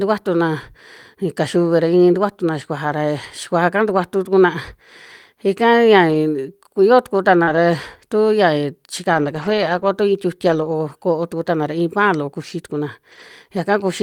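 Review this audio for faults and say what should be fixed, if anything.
Lost packets rebuilt from error correction show up as short rough, noisier stretches at 3.89–3.99 s, 6.09–6.15 s (right after "ika ya"), 7.47–7.58 s, 9.14–9.88 s (ending at "tu iin"), 10.48–10.74 s (between "tu iin" and "ko'o tuku'tana ra iin") and 13.12–13.22 s. Each time the decoder played the low-bitrate backup copy carried in the next packet, so nothing drops out, but those frames sound grainier. The longest patch is at 9.14 s. Fix the network path dropping these packets, for example by giving the call traffic priority.

There's also a short concealed packet loss at 7.43–7.56 s, overlapping that FEC patch. About 40 ms never arrived in time, so the receiver stretched the preceding sound over roughly 35 ms and blended back in. It sounds like a brief smear and adds a few milliseconds of timing drift. A slightly deeper jitter buffer would help prevent this.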